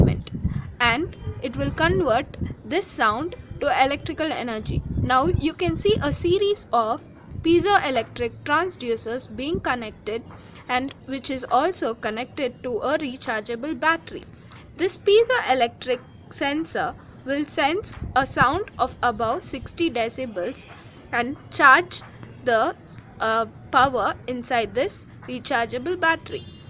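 The signal holds steady throughout, with nothing in it that points to a problem anywhere along the recording or playback chain.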